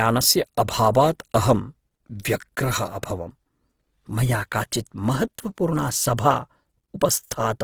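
From start to finish the speech carries a grainy, rough texture, likely from Opus compression in its CELT music mode. Short of bits, the encoder fills bands with folded or noise-like content, so tones sound coarse. The damage fits a low rate of around 16 kbps, and the bandwidth still reaches about 20.2 kHz.

At 0.93 s there's a pre-echo: a short hiss creeps in roughly 16 ms before a sharp attack. The transform block spread its quantisation noise backwards into that quiet gap, which leaves the onset sounding smeared instead of crisp.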